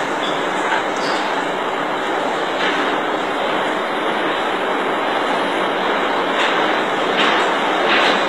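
From start to finish the treble sounds synthetic: highs above the lower band turn gritty and metallic, with nothing above 14.8 kHz. This is likely HE-AAC compression at a low bitrate near 20 kbps, where copied and reshaped lower bands stand in for the real treble.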